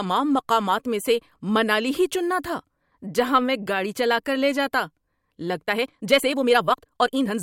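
Speech runs at a natural pace until 5.61 s, when it abruptly speeds up and stays rushed to the end at 7.43 s. That final stretch plays about 1.64 times faster, yet the pitch does not rise, which marks a time-stretched section rather than a simple speed-up. The delivery sounds rushed as short slices of the waveform are discarded to shorten the passage, likely from software squeezing the ending to fit a fixed length.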